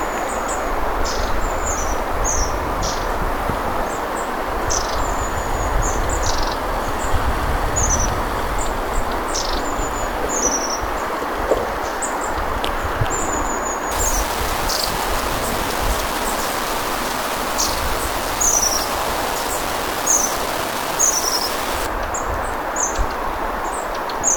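Low bit depth without dither runs from 13.91 s to 21.87 s. Across this stretch the sound turns coarse and grainy, with a distortion that rises and falls with the signal and leaves the quieter moments sputtering or dropping out entirely. The likely cause is that the audio was rounded to about 4 bits with no dither, so the quantisation error tracks the waveform instead of forming steady hiss. That error sits nearly as loud as the signal itself.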